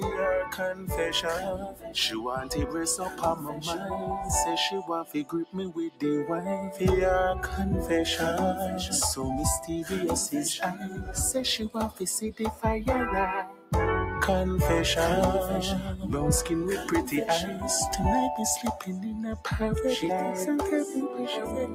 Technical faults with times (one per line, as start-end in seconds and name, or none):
0.00-21.75 noise suppressor applied to music or sounds
0.00-0.94 sound cut by the noise suppressor
1.37-2.75 sound cut by the noise suppressor
3.09-4.08 sound cut by the noise suppressor
4.78-6.02 sound cut by the noise suppressor
10.73-11.11 sound cut by the noise suppressor
11.90-12.64 sound cut by the noise suppressor
13.44-13.72 sound cut by the noise suppressor